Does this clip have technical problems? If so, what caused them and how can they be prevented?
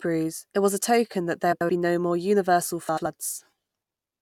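Yes, there are frames out of order at 1.52 to 1.70 s, right after "was a token that", and at 2.88 to 3.06 s, just after "be no more universal". Each time two neighbouring blocks of about 85 ms got swapped and decoded in that order. You hear a garbled flutter, but no time is lost. Reordering packets by sequence number in the jitter buffer before decoding prevents it.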